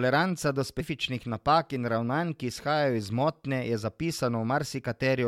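At 0.79 s, just before "napak in ravnanj ki", the speech jumps forward because compressed frames are skipped. A run of roughly ten frames was either absent from the stream or rejected by the decoder, so about a fifth of a second of audio never plays. The jump length is a whole multiple of the 23.2 ms frame size.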